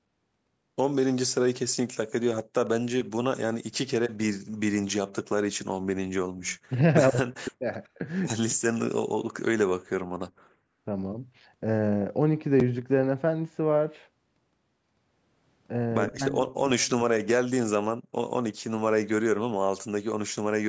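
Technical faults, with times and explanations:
3.36–3.43 s, 7.11–7.66 s, 8.39–8.89 s and 16.11–17.14 s: speech suppressed in double talk. The voice dips by as much as roughly 40 dB, in short pieces or for about a second at 16.11 s. Both sides were likely talking at once, and the echo canceller turned everything down.
6.39–6.58 s, 7.84–7.89 s and 16.08–16.12 s: echo leak. A faint copy of the speech returns 119 ms late, about 30 dB below the voice, and about 40 dB below at 7.84 s. It is likely loudspeaker sound the far-end echo canceller missed and sent back.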